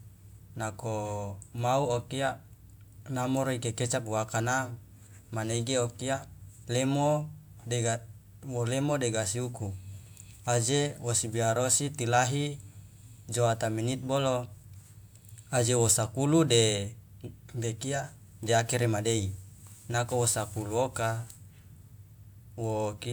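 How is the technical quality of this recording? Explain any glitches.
No technical glitches are audible anywhere in the recording, and the signal holds steady throughout without any disruption.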